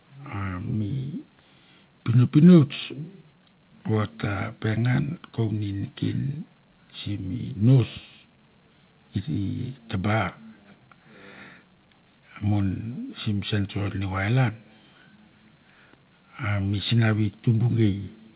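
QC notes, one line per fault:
No faults are heard in this speech clip. It has come over a WebRTC call path, and with nothing above 4 kHz its narrowband sound fits a G.711 A-law link at 64 kbps.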